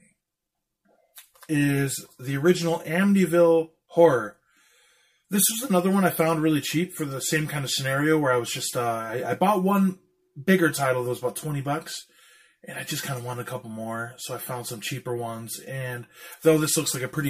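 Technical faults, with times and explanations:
Throughout: channel delay (comb filtering). One channel trails the other by roughly 5 ms, and summing them to mono cancels shared content near 100 Hz and at regular intervals above it, giving a hollow, phasey tone. A spectrogram shows fixed, evenly spaced dark horizontal bands.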